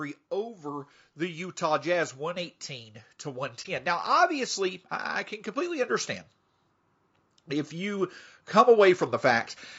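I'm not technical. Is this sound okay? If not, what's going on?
No, not quite. The speech has a rough, grainy edge all the way through, most likely from low-delay AAC compression, the kind video calls use, squeezing the sound too hard.

There are three spots of automatic gain rising, where the level slowly swells as the system turns itself up: 0.3 to 2.7 s, 3.2 to 6.1 s, and 7.5 to 9.6 s.

There's also an AAC frame loss with muting around 3.62 to 3.66 s. A tiny chunk of audio went missing and was replaced by a soft, brief gap.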